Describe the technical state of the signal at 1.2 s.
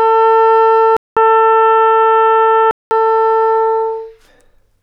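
The input likely switched to a poorer device from 0.97 to 2.91 s. After a 200 ms silence, its narrower band passes nothing above 3.8 kHz, so the sound turns dull.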